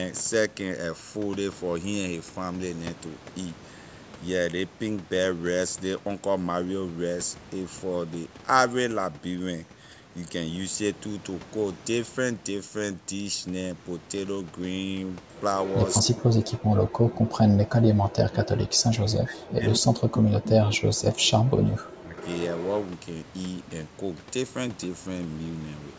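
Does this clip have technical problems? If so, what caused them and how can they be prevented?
Yes. An echo leak appears from 15.64 to 16.0 s, 19.7 to 19.77 s and 22.17 to 22.87 s. A faint copy of the speech returns 228 ms late, roughly 15 to 20 dB down. A loudspeaker's echo canceller likely let it through. A headset would prevent it.

From 16.0 to 22.16 s the speech is suppressed in double talk. It dips, about five seconds in total, by up to around 40 dB. The echo canceller likely treated it as echo while both sides spoke. Better double-talk detection would prevent this.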